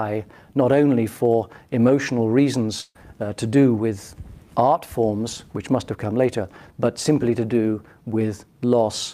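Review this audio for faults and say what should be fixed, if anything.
A burst of packet loss occurs from 2.81 to 2.97 s. Several consecutive packets failed to arrive in time, so the receiver concealed the gap by extending the last received sound for about 133 ms while fading it down, leaving roughly 40 ms of silence before playback picked up. When the audio resumes, about 140 ms of the original material is gone, so the sound jumps forward. A larger jitter buffer, forward error correction or packet redundancy would prevent this.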